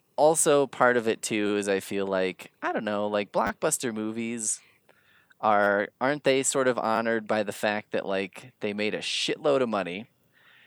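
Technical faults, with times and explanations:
1.47–1.50 s, 3.47–3.50 s, 5.64–5.67 s and 6.96–6.98 s: repeated buffer. The output received no fresh audio in time and replayed its last 10 ms block, three extra times in the first three events and twice in the last. A hard join at each repeat turns the events into brief buzzy stutters, after "also part of it", before "aren't they sort of", and between "aren't they sort of" and "by the fact that". Essentially no sound is lost. The replays insert time.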